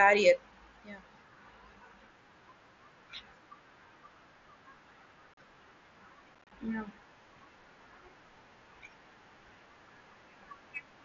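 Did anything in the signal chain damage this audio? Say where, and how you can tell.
Yes. Unconcealed Bluetooth headset packet loss on the headset-to-phone radio link: the speech drops out abruptly for about 38 ms at 5.34 s, then turns choppy from 6.35 to 6.52 s in gaps up to 30 ms. The holes are hard-edged, filled with silence or an idle pattern with nothing patched in, unlike concealed network loss, while the light mSBC graininess on loud sounds is normal for the codec.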